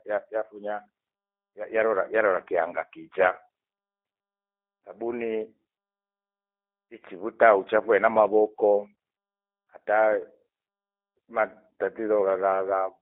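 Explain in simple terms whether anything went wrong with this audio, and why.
The speech sounds thin, boxy and slightly rough and robotic for the whole clip, like a poor phone line. That is the G.729 codec, which squeezes speech by rebuilding it from a simple model, keeping only sound between about 300 Hz and 3.6 kHz.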